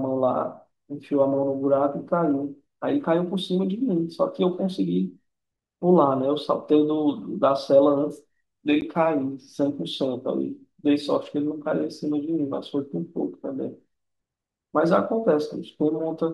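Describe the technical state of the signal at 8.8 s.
At 8.81 s the speech drops into a block of digital silence about 10 ms long: samples drop to silence, with no fade in or out. The gap is too short to be heard as silence and comes across as a tick or dip. A fade-based dropout would sound softer.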